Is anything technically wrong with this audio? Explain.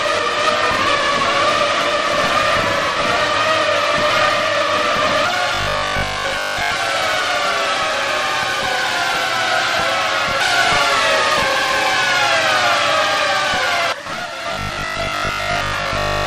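Yes. There is robotic sound from repeated short buffers from 5.55 to 6.71 s and again from 14.53 to 16.25 s. The sound turns into a rigid, metallic buzz at 50 Hz. The likely cause is new audio arriving too seldom, so playback fills the gaps by looping the last fragment, which fits a 20 ms buffer. Most of the real audio in these stretches is skipped, and the repetition imposes that fixed 50 Hz buzz.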